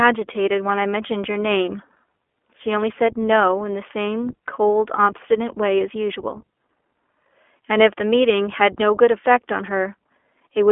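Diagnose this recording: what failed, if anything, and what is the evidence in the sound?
iLBC codec damage runs through the whole clip, at the codec stage. Nothing survives above 3.7 kHz and the speech sits in a 300 to 3400 Hz telephone band. A plainly audible rough, synthetic texture fits 20 ms frames coded independently at about 15.2 kbps.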